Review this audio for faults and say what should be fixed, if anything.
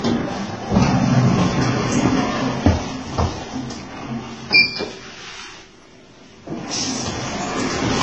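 Transcoding between lossy codecs, throughout: nothing is present above 10.2 kHz, and several different smeared, warbling artefacts are heard together. This likely comes from a chain of HE-AAC, WMA and then Vorbis, with each re-encode adding its own damage and keeping the lowest cut-off. To prevent it, encode once from the uncompressed original.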